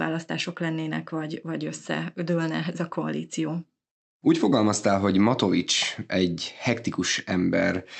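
No technical faults can be heard anywhere in the speech. It has passed through a WebRTC call path, and the high end stops at about 8 kHz, which fits an Opus codec running at around 64 kbps.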